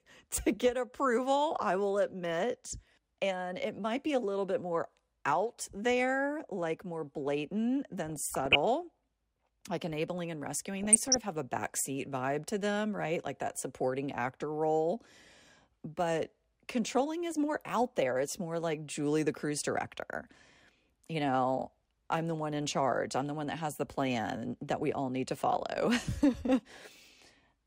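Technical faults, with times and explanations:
8.09 to 8.56 s and 10.74 to 11.18 s, DAB burbling: weak reception lets bit errors, at a rate of under one percent, corrupt MP2 frames, so short blips of noise appear in individual sub-bands over the speech. A spectrogram shows scattered horizontal blocks flaring and vanishing across bands. This pattern fits about twenty damaged frames in each burst.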